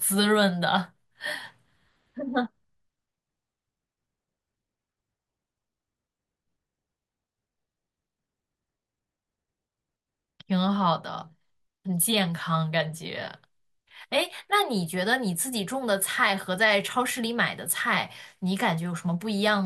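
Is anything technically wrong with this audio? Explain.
No, nothing technically wrong can be heard anywhere in this speech recording.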